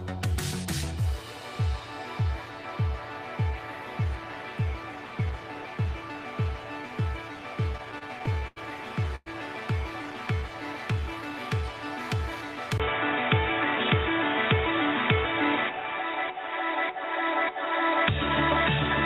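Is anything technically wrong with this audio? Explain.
Yes, there are two faults. From 7.77 to 9.28 s there are repeated stalls (stutter): eleven late-packet gaps, the longest 105 ms, were each bridged by continuing the last sound. The audio drags rather than dropping out, and nothing is lost.

At 12.78 s a 20 ms silence is followed by dull, boxy sound. The level also shifts by about 5 dB, and a new noise floor about 40 dB down appears. This abrupt, lasting change is likely an input switched to a poorer device, not a filter, since the noise changes too.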